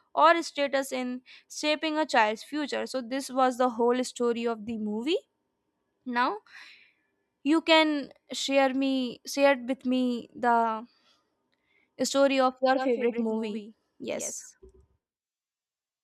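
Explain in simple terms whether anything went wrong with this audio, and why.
Something does go wrong near the end. From about 12.73 s right through to the finish, there's a doubled audio track: a second copy of the speech comes in roughly a tenth of a second behind the original, noticeably quieter but just as clear, with no room echo or fade. It switches on abruptly, giving that slapback, talking-over-itself effect. The likely cause is the sound being picked up twice, once through a slower path, and both getting mixed together.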